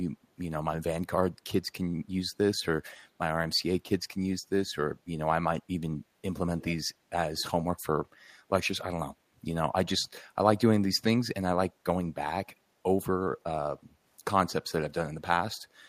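At 6.6 s, a faint, delayed copy of the speech trails the original by about 170 ms for roughly a tenth of a second, sitting some 20 dB below it. A shorter, fainter scrap follows at 7.38 s, lasting about 0.05 s at the same delay. This is echo leak, likely from a far end on loudspeaker whose echo canceller let part of its microphone pickup slip back down the line.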